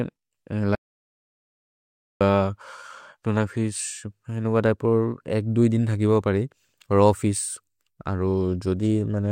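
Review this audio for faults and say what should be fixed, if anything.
Audio dropout to silence, 0.75 to 2.21 s: the speech cuts off abruptly and returns mid-flow after about 1.45 s of silence with no room tone, so whatever was said in that gap is lost. The likely cause is a momentary loss of input, such as a loose connection, a failed link or an accidental mute, while recording continued. To prevent it, secure cables and wireless links, lock mute controls, and monitor input levels live so a dropout can be caught and the take repeated.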